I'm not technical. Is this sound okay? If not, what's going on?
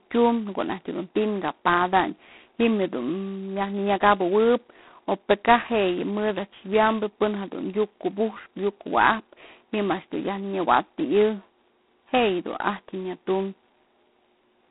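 No. The whole clip has heavy G.726 ADPCM damage. This phone coding stores each tiny step as a rough guess of the change. Here it is squeezed hard, so a harsh, rasping hiss rises and falls with the speech. Everything above about 3.9 kHz is gone.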